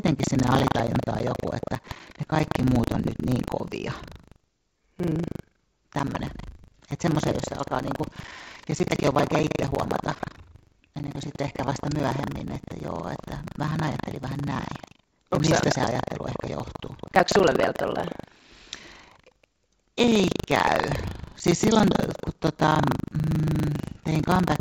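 Buffer tearing runs through the whole speech clip. The write and read pointers of a ring buffer have slipped, so roughly a fifth of each 40 ms period replays audio from about 150 ms earlier. This produces a rattling 25 Hz buzz that is present only during speech. On the waveform it appears as evenly spaced hard seams. On a spectrogram it shows as regular vertical striations, all below the 8 kHz ceiling of the G.722 call path.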